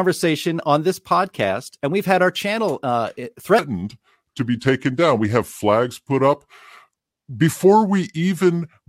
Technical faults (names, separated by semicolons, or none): section at the wrong speed